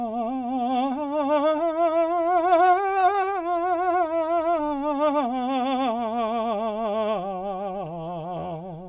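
Nothing stood out as a technical fault on listening to this music.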